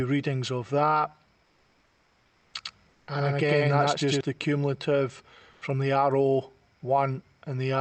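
From 1.43 to 2.53 s the real background gives way to comfort noise in place of the background: a smooth, featureless hiss about 4 dB quieter than what it replaces, likely generated by Opus DTX after the sender stopped transmitting during a pause. On a spectrogram the textured floor, already some 40 dB below the loud parts and capped near 8 kHz by the call path, turns into an even, grainless wash that begins and ends abruptly.

A doubled audio track runs from 2.65 to 4.21 s. A second full-band copy trails the first by around a tenth of a second at roughly the same level, likely from a second, slower capture path being mixed in. It sounds like a hard, dry slapback with no room tail. The waveform shows every transient repeated at a fixed offset, and on a spectrogram each onset appears twice as a pair of vertical stripes. The copy appears and disappears abruptly at both ends.

Inside that stretch, from 2.89 to 3.07 s, the background briefly becomes comfort noise again, about 3 dB lower and flat-textured, likely another Opus DTX fill.

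A last patch of comfort noise at 5.51 to 5.61 s lasts only about 100 ms. This time it is about 2 dB louder than the surrounding floor, a short, even block visible as a slightly brighter, uniform band on the spectrogram, and likely also produced by Opus DTX.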